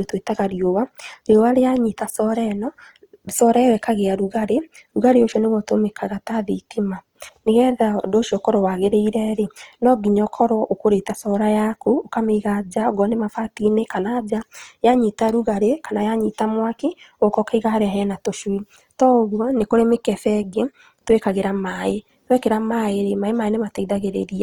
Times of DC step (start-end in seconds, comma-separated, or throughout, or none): none